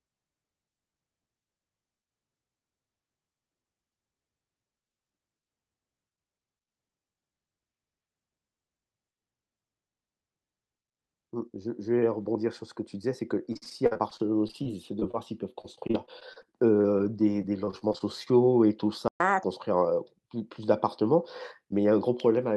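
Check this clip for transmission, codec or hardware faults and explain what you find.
Packet-loss and playback faults cluster in the second half of the speech, from about 13.5 s to 19.4 s.

Repeated packet loss (robotic sound) occurs at 13.45–15.16 s, 15.62–16.45 s and 17.37–18.02 s. Gaps up to 49 ms keep being patched by extending prior audio, giving a choppy texture with pieces missing.

Short concealed packet loss occurs at 16.81–16.86 s and 16.98–17.01 s. Brief holes are filled by continuing the preceding sound, heard as a quick smear or wobble.

A playback stall at 19.08–19.20 s silences the output for 120 ms, likely because the player ran out of buffered data or its thread was blocked.

Catch-up at higher speed follows at 19.20–19.44 s. The backlog plays at 1.5× through resampling, so the sound rises about seven semitones before returning to normal.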